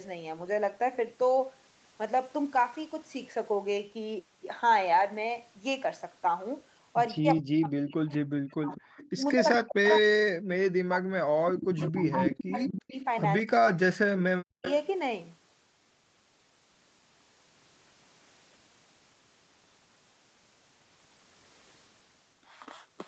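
From 7.19 to 8.79 s, 9.15 to 12.94 s and 13.68 to 14.65 s the speech dips by up to about 40 dB. That's speech suppressed in double talk: with both ends talking, the echo canceller likely couldn't separate talker from loudspeaker and turned everything down. Echo leak shows up at 8.78–9.09, 9.46–9.57, 9.91–9.95, 11.61–13.06 and 14.63–14.73 s as a copy trailing by 209 ms, about 25 to 5 dB under the speech, likely residue the canceller missed and sent back.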